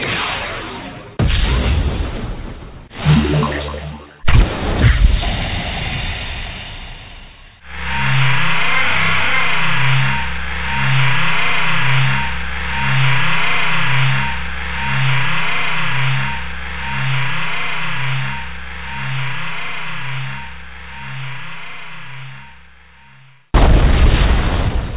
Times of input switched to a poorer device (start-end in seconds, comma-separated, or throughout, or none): none